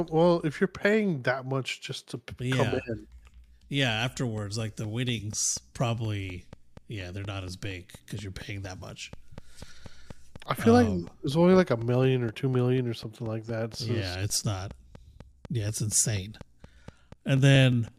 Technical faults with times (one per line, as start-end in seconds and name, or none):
4.38-17.89 train of clicks
7.64 DC step
14.30 DC step